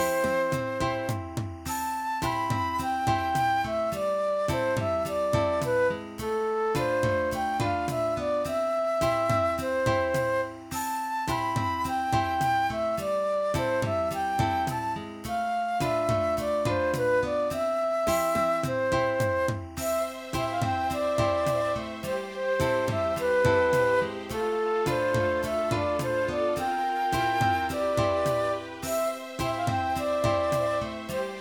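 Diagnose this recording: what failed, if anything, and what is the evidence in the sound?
Timecode bleed in the analogue wiring: from 0 to 21.99 s, a chirping warble sits roughly 30 dB under the sound. Linear timecode at 24 frames per second is leaking from an adjacent cable. A spectrogram shows flickering bands near 1 and 2 kHz that stop at 21.99 s.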